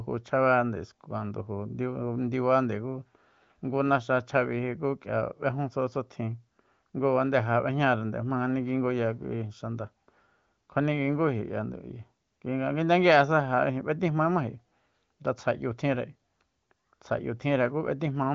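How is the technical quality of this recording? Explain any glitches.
No glitches turn up anywhere here; it's simply wideband phone audio whose top end stops at about 7.5 kHz, which fits AMR-WB running at its 23.05 kbit/s mode.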